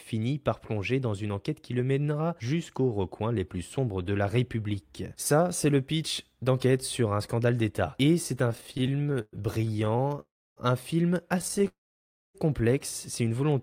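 From 8.49 to 10.2 s, just after "c'est un", the speech breaks into repeated stalls (stutter): dozens of brief holds, the longest about 113 ms, filling roughly a third of that stretch. Packets were arriving late or slower than playback, so the jitter buffer kept running dry and the receiver stretched the last sound each time. Nothing is lost; the audio simply drags and catches.

At 10.2 s a call audio freeze follows: the last sound hangs, fades, and gives way to about 300 ms of silence before the speech resumes at "un film" at 10.59 s. The likely cause is packets held up in transit long enough to empty the jitter buffer, inserting a 366 ms gap with nothing cut out.

From 11.39 to 11.68 s, after "un film", the stutter returns more finely: closely spaced catches of around 13 ms or less, again concealing about a third of the span.

From 11.68 to 12.36 s a second, longer freeze occurs: the sound trails off into roughly 600 ms of silence, adding about 668 ms of delay before the audio continues where it stopped.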